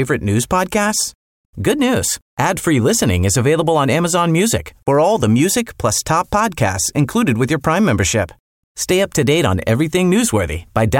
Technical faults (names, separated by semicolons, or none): none